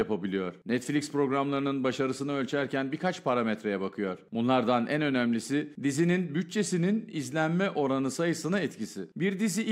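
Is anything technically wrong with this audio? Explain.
No, nothing in this audio points to a technical fault: the signal holds steady throughout, with no interruptions, distortion or level problems to be heard.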